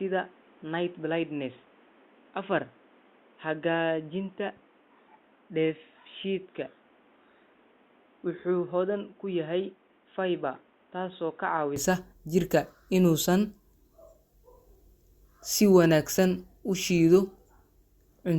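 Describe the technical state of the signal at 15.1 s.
At 15.1 s the signal is intact, with no audible fault at that moment.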